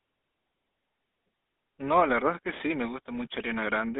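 From start to finish the speech carries GSM full-rate codec damage. The band runs only from 200 Hz to 3.7 kHz. Pulse-driven excitation, decimated to every third sample, makes the voice buzzy and gravelly. The roughness is plainly audible, consistent with 13 kbps coding.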